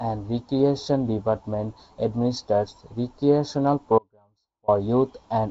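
At 3.99 s, after "administers recreational", an audio dropout to a faint residue cuts the sound for 0.69 s to about 35 dB down, likely a brief source loss. It shows as a sharp-edged, near-flat gap on the waveform and spectrogram.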